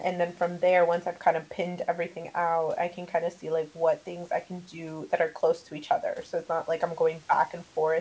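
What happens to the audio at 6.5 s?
Nothing goes wrong at 6.5 s; the speech passes through intact, with only the ordinary band limit of the call codec and the faint room noise that run through the whole recording.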